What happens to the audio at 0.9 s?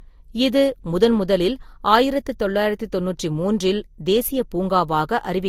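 At 0.9 s the speech, as throughout the clip, was likely transcoded between lossy codecs: encoded once, then re-encoded, which fits Vorbis followed by Opus at around 48 kbit/s. The second encoder spends bits on the first one's artefacts, so both sets of artefacts are heard together, with nothing above 20.1 kHz.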